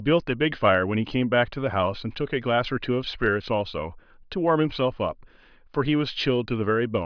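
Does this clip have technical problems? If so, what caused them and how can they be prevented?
No, nothing technical stands out in this speech clip, so there's nothing here that needs fixing or preventing.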